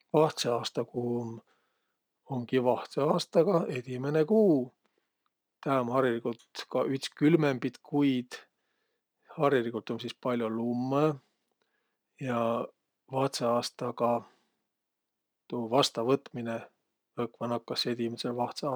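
Sample clock jitter runs throughout this speech recording: the converter's timing wanders by a few microseconds, so each sample lands slightly off its instant, leaving a roughness roughly 35 dB below the signal that thickens on loud, bright consonants and disappears in pauses.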